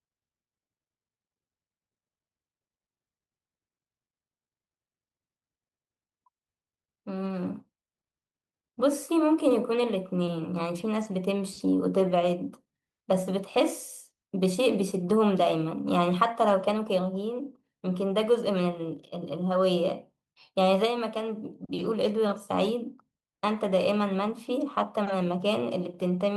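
No technical faults can be heard anywhere in this speech recording. Nothing in the audio breaks, drops out or changes abruptly from beginning to end.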